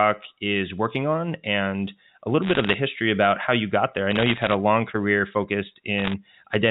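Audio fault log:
2.42–2.74 s, 4.11–4.54 s, 5.98–6.13 s: bit errors on a digital phone line. Flipped bits each corrupt one 8-bit telephone sample, and hits on the sign or upper bits snap out as sharp ticks. The result is scattered crackle over speech that stays intact underneath, unlike packet loss, which gaps or smears it.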